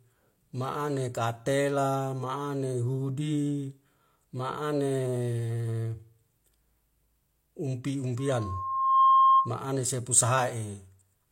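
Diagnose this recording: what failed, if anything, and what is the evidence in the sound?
A 1.1 kHz tone swells over about 0.7 s into a squeal roughly 10 dB above the speech, 8.17 to 9.56 s, before "ane sepu": loudspeaker feedback squeal, with the microphone-to-loudspeaker loop gain exceeding one.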